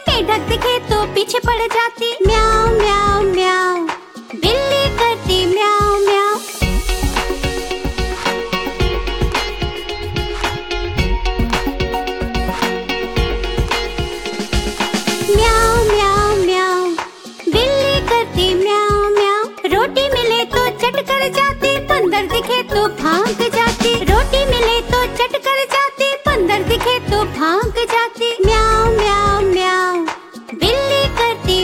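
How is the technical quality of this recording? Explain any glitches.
Clock slip clicks run through the recording from 0.16 s to 31.62 s, one tick about every 70 ms, several hundred in all. The likely cause is two devices running on unsynchronised clocks that differ by around 300 ppm, so a single sample is dropped or repeated each time the drift reaches one whole sample. The result is a faint, evenly spaced rattle, clearest on louder sustained sound and vanishing in silence.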